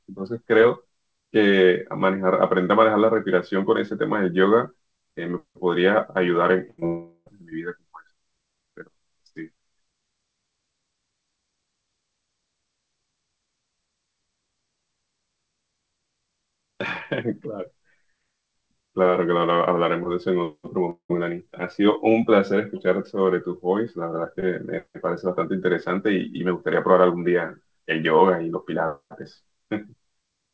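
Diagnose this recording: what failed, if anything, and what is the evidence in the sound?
The network is where this call broke. At 6.70 s there's a burst of packet loss lasting until 6.80 s. About 80 ms of speech went missing in a row, and the receiver covered it by stretching the last sound and fading it down. You hear that last sound held and dying away where the speech should carry on, and then it picks up a little further along with that chunk gone.

Right on its heels, from 6.80 to 6.84 s, comes a short concealed packet loss of about 20 ms. The decoder patched the hole by continuing the previous sound and blending back into real audio, so it comes across as a quick smear rather than a clear gap.

The bigger hits are two long network dropouts, each likely a stall where no packets arrived for a while. The first runs from 6.86 to 7.28 s and loses about 400 ms. The concealment drags on and fades, leaving a brief silence before the speech resumes. 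The second, from 20.90 to 21.11 s, loses about 200 ms and ends in roughly a tenth of a second of silence. The audio stops short of 8 kHz, which fits a G.722 link at 64 kbps.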